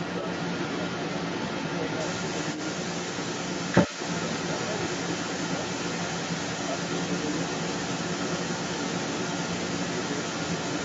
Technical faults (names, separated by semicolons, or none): other side's voice leaking through